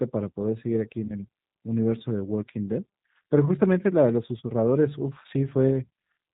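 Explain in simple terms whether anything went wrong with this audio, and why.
Throughout the speech, the G.729 codec makes everything sound slightly rough and synthetic, with nothing above 4 kHz. That steady thinness is the codec, not a damaged recording.

At about 1.07 s, VoIP packet loss concealed by the speech codec occurs. A missing 20 ms piece is patched with a fading stretch of the preceding sound, and the sound stays weakened until about 1.12 s. There is no silent gap.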